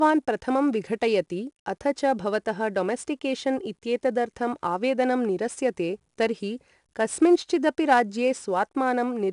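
A gritty hiss rides on the louder speech from start to finish, and nothing reaches above 10.6 kHz. This is 4-bit ADPCM compression: each sample is coded as a coarse 4-bit step, so the error tracks the signal level. The sound fits a stream near 89 kbps.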